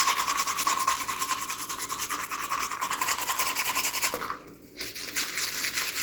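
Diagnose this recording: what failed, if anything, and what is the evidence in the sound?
The failure is at the codec stage, and the likely cause is Opus compression. Throughout the clip the sound is rough, grainy and hoarse. This fits Opus running in its hybrid mode at a low rate near 16 kbps. Too few bits are left to render fine detail cleanly.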